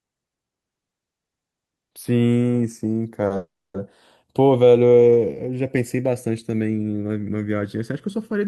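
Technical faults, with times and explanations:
Throughout: channels drifting apart. The left and right channels appear to run on separate clocks that differ by something around 100 ppm, so the delay between them creeps steadily and reaches a little under a millisecond by the end. Summed to mono, that slowly changing offset moves the comb-filter notches gradually through the spectrum, heard as a slow flanging sweep over the speech that never settles at one colour.
3.26 to 3.33 s: short stall from a late packet. One packet arrived after it was due and the jitter buffer ran dry, so the receiver held the last sound for about 40 ms until the packet turned up, then resumed from the same point. Nothing is lost, but the sound is stretched unnaturally, with a faint buzz or dip, and everything after it is delayed by 40 ms.
3.36 to 3.77 s: call audio freeze. The sound stops moving forward for about 380 ms. 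It first continues as a fading buzz or hiss from the last sound, then goes silent for roughly 270 ms before the speech picks up exactly where it left off, with nothing missing. The likely cause is packets held up in transit, emptying the jitter buffer; the result is an inserted gap that pushes the rest of the clip about 380 ms later.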